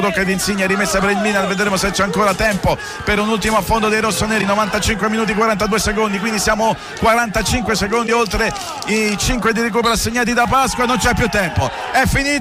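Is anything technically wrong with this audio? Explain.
Yes. Two brief glitches occur, at 4.40 to 4.43 s and at 8.06 to 8.09 s. Each lasts about 30 ms, roughly one 26 ms frame, and the audio skips ahead. The likely cause is a broken MP3 bit reservoir: after missing frames, the next frame borrows bytes that now belong elsewhere.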